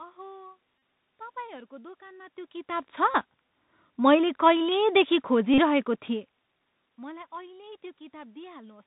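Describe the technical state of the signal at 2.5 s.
At 2.5 s the signal carries the Bluetooth CVSD headset codec, present across the whole clip. Each sample is reduced to a single up-or-down bit, consistent with a 64 kbit/s link, and the step size adapts to follow the waveform. The damage is plainly audible: the band is cut off at 4 kHz, sibilants sound scratchy, loud high-frequency sounds smear where the step cannot keep up, and a granular hiss sits underneath. A spectrogram would show a hard ceiling at 4 kHz with nothing above it and a grainy noise floor. The waveform would show stair-stepped, slope-limited edges on sharp peaks. The level change from the talker shifting position around 2 s is natural.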